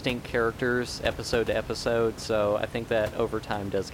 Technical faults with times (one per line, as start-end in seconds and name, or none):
none